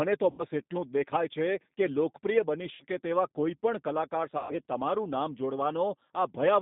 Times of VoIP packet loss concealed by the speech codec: 0.31-0.43, 2.74-2.85, 4.38-4.55

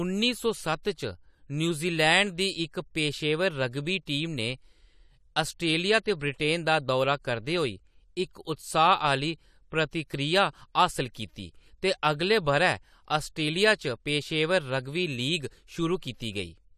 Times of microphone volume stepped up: none

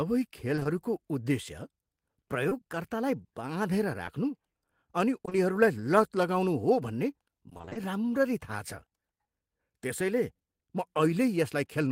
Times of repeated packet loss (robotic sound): 7.49-7.77

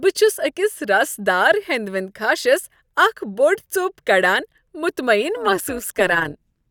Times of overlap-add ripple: 5.37-6.71

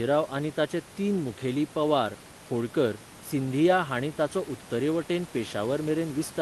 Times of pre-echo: none

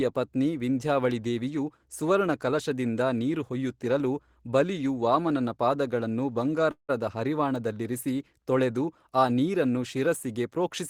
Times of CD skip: none

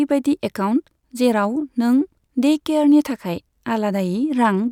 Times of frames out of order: none

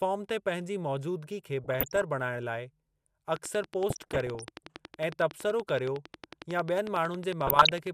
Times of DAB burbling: 1.64-2.03, 3.89-4.45, 7.47-7.73

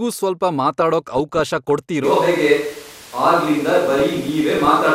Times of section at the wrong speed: none

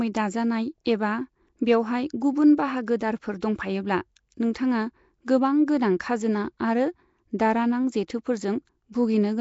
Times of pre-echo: 2.86-3.00, 3.40, 4.54, 8.93

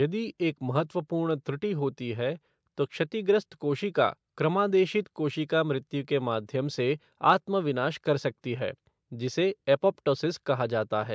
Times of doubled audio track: none

